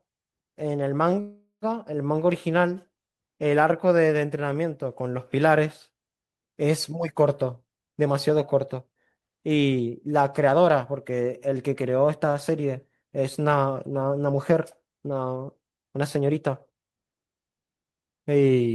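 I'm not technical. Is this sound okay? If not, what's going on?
No. A call audio freeze happens at 1.21 to 1.65 s: the speech stops and a fading buzz fills the gap, ending in about 0.11 s of silence. This was likely caused by delayed network packets. Nothing is lost, but everything after arrives about 0.41 s late.

Jitter buffer speed-up happens at 7.51 to 10.49 s and again at 15.85 to 16.91 s. The speech runs about 9% faster at the same pitch and sounds hurried, as the receiver trims tiny slices to catch up after the delay. It cuts roughly a third of a second the first time and about a tenth the second.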